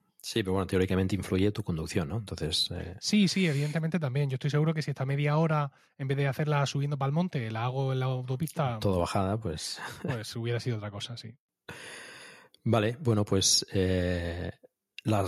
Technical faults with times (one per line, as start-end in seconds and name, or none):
none